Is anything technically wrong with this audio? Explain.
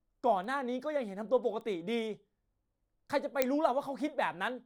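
Yes. Bit error spikes occur at 0.44, 1.61 and 3.42 s, each a single corrupted sample where a flipped bit throws the value out and back, reaching about −38, −32 and −8 dBFS. Each is a bare broadband tick with no gap or step, which sets it apart from a dropout or edit click.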